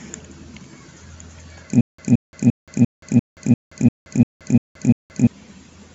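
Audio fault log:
1.81–5.27 s, stutter with silent gaps: a burst of speech about 171 ms long plays, then drops to digital silence for about 175 ms, repeating every 346 ms, ten times over. The likely cause is a stalled player or stream replaying its last fragment at each retry before running dry, so the speech that belonged in that span never arrives. The waveform shows identical blocks separated by flat silent stretches, and the spectrogram shows matching stripes alternating with fully black gaps.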